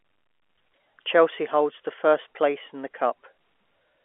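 Nothing stood out on listening; the speech comes across with the narrow, slightly thin band of G.711 telephone coding, roughly 300 Hz to 3.4 kHz, and no technical faults catch the ear.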